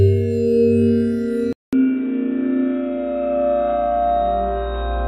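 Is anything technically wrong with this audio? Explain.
Yes. At 1.53 s the audio cuts to silence for 200 ms and then resumes through what is likely an input switched to a poorer device, which continues to the end. After the switch, nothing is present above 3.8 kHz, so the sound turns dull and boxy. It comes back about 5 dB quieter, with a new background noise sitting roughly 30 dB below the signal, consistent with a different microphone or a narrowband headset call profile taking over the input.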